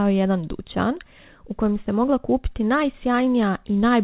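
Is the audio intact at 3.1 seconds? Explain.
Yes, the audio is intact at 3.1 seconds, with no dropout, glitch or distortion there, only the narrowband telephone-style sound of the call path, which carries nothing above 4 kHz.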